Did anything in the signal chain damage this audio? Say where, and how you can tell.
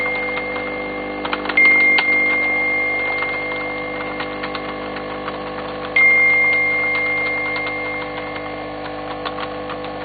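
No, nothing in the signal chain stood out as damaging this audio on listening.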